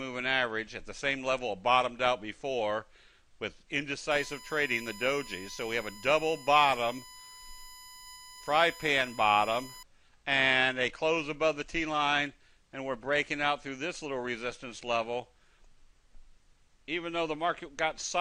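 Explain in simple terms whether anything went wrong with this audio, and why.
Something did go wrong. From 4.11 to 9.83 seconds there is USB whine, a steady, fixed-pitch whistle under the sound. A USB connection draws power in 1 kHz bursts, which leaked into the audio. Here the whine sits on 1 kHz multiples, strongest at 5 kHz, quieter than the main sound.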